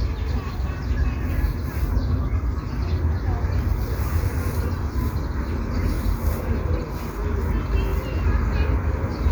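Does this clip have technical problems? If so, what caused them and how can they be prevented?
Yes. The audio has repeated frames at 5.95–5.97 s and 7.88–7.90 s. In each case a single compressed frame of about 23.2 ms was decoded twice, so that slice of audio plays once more and the timeline stretches by 23.2 ms per event. Each one is heard as a brief stutter. The 23.2 ms block length fits a 1024-sample frame at 44.1 kHz. To prevent it, deduplicate frames by sequence number or timestamp in the writer, packetizer and receiver before decoding.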